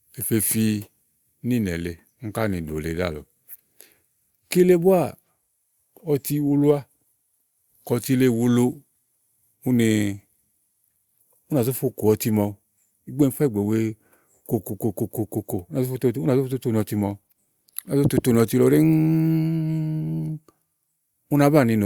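No technical faults are audible.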